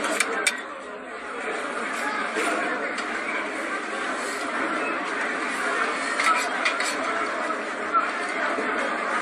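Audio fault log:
Throughout: generation loss, likely from about five passes through an AAC-LC codec at a rate near 96 kbit/s. Quantisation noise and spectral holes pile up, so the sound turns swirly and hollow and its attacks blur. A spectrogram shows patchy, smeared energy and nothing above 13.7 kHz.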